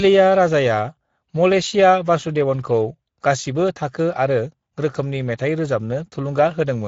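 Speex codec damage runs throughout the speech, from start to finish. The CELP coder has too few bits to model the excitation, which fits a setting near 16.8 kbps, so the voice comes through plainly noisy and hoarse, with a rough grain.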